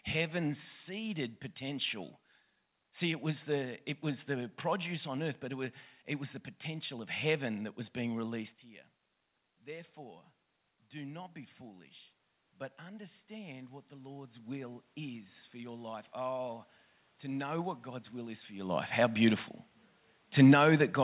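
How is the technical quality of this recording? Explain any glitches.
The speech has one gain fault. It sits on top of a telephone-band sound with nothing above 4 kHz, which fits G.711 mu-law at 64 kbps, and room noise.

Automatic gain rising, from 9.67 to 18.78 s. The talker drops about 15 dB, having moved back from the microphone around 8.5 s. The gain control slowly adds about 11 dB to compensate. Voice and room noise swell together over those nine seconds.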